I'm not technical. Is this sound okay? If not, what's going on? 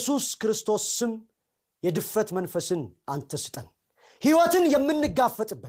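Yes, nothing's wrong here: the speech comes through with no problems anywhere along the way.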